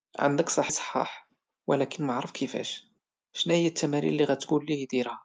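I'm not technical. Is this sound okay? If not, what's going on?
No. At about 0.69 to 0.71 s the speech suddenly jumps forward. This is a skip ahead: roughly a second of speech was thrown away on its way through the call connection, and playback continued straight from the later part. What sets it apart from a dropout is that there is no silence or hiss filling the hole. The speech before and after is simply joined together, so the only clue is that something is clearly missing.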